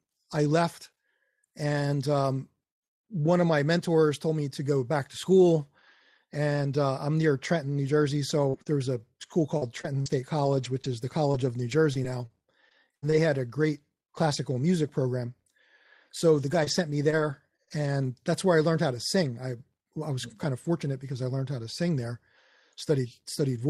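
From 8.29 to 13.14 s there is repeated packet loss with a robotic sound. Around a dozen holes follow closely, the longest 77 ms, with about 400 ms of audio missing in total. Each hole is bridged by stretching the preceding sound, so roughly half a second is rebuilt. Because the patches come so close together, the speech turns choppy and robotic rather than just briefly flawed. The stretch ends just before "had a great classical".

Between 16.34 and 17.94 s, just before "that's where I learned", there are scattered short gaps. About five isolated holes, none longer than roughly 30 ms, remove 100 ms in all, and 280 ms is rebuilt by continuing the last sound. Unlike the earlier stretch, the losses are spread out with clear audio between them, so they come across as brief ticks and small smears rather than a sustained robotic texture.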